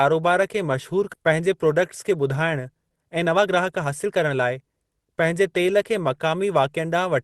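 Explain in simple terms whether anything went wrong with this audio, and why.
Two things went wrong here. First, a skip ahead at about 1.13 to 1.15 s: roughly a second of speech got dropped, and playback jumps straight to later audio with no gap.

Then, from 1.24 to 5.34 s, there's a jitter buffer speed-up. The receiver was holding too much audio, so it trimmed out tiny slices, about half a second in total. The speech runs roughly 13% fast at the same pitch and sounds a bit rushed.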